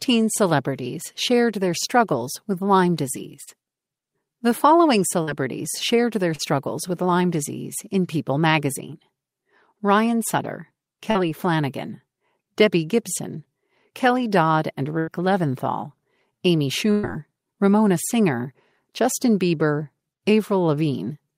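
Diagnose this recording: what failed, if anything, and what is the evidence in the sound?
Short concealed packet loss at 3.43, 5.23 (just before "shared their"), 6.35 (just after "shared their") and 11.11 s: network stage. About 40 ms never arrived each time; the receiver extended the preceding sound for 34 to 44 ms, producing brief smears or wobbles before blending back.

Burst of packet loss at 14.99 to 15.10 s and 16.91 to 17.06 s: network stage. Consecutive packets, about 80 ms then 120 ms, were lost or late; concealment held and faded the last sound into a buzz or hiss, and the audio resumed with that stretch missing.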